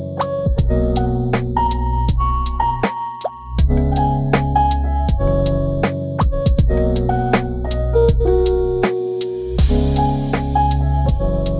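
Aliasing runs throughout: content above 4 kHz folds back as unrelated tones, pointing to an unfiltered drop to 8 kHz sampling and adding faint metallic grit.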